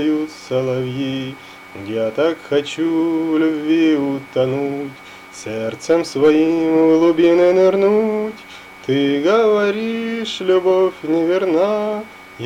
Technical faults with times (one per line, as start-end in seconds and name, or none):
none